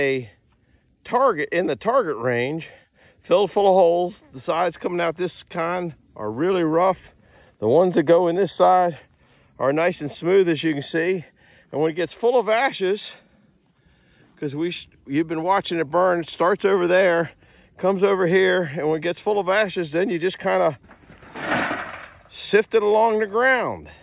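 No faults turn up anywhere in this clip, with no dropouts, clipping, glitches or other technical problems to flag at any point.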